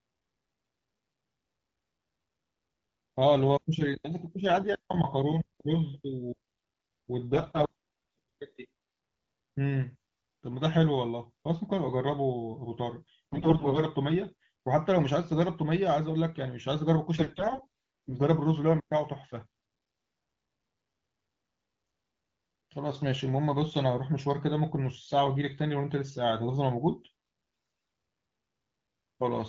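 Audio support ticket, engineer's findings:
AMR bit errors: four short hoarse, gargly bursts at 7.33–7.70 s, 13.32–13.81 s, 17.16–18.14 s (the longest, about a second) and 27.53–27.89 s (the harshest). Pitch and level hold, but the texture goes scratchy. The radio link is flipping the lightly protected frame bits while the core checksum still passes, so excitation pulses land wrong and the fine gain and spectrum values drift. The error rate sounds moderate in the first burst and heavy by the last. The AMR wideband (HD Voice) codec sounds clean between bursts.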